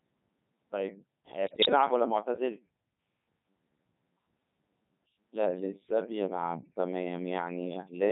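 A speech clip carried through the Codec 2 vocoder at 3.2 kbit/s. Heavy damage throughout: a buzzy, robotic synthetic voice rebuilt from pitch, voicing and envelope parameters. From 1.47 to 1.69 s, bit errors on digital voice radio scramble about ten frames. Pitch, level and tone jump into warbling gibberish, which fits an error rate of several percent.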